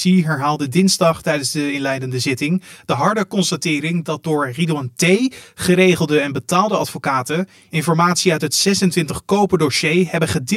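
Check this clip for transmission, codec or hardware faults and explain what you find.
One fault runs through the whole speech clip: channel delay, heard as comb filtering. One channel arrives roughly 10 ms behind the other, and the two are summed to mono. Components common to both channels cancel at evenly spaced frequencies, with the first notch around 50 Hz and further notches about every 100 Hz above it. The result is a fixed, hollow, phasey colouration on the speech from start to finish.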